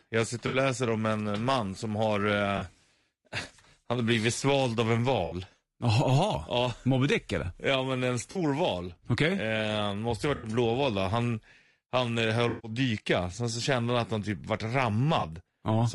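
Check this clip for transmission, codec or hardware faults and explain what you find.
Two faults are audible: low-delay AAC compression across the whole speech clip, and seven short dropouts from AAC frame loss with concealment.

Low-delay AAC compression runs throughout. The voice sounds rough and grainy, with noise between harmonics. Short frames, likely AAC-ELD near 32 kbps, resolve pitch poorly.

AAC frame loss with concealment occurs at 0.47 s before "läser om en man", 2.57 s, 5.25 s, 8.31 s after "men en", 10.35 s, 12.49 s, and 15.19 s. Each patch is a smeared, noisy or phasey stretch. The decoder fills the missing audio from the last good spectrum. Gaps run 40 to 140 ms. The longest, 140 ms, falls between "han eh" and "dyka sen så kände".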